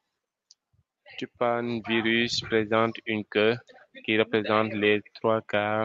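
From 1.46 to 2.46 s there's automatic gain rising: the gain control decided the speech was too quiet and eased its level up by about 4 dB over that second, so the voice and the background noise swell together, with the call path's 8 kHz ceiling unchanged.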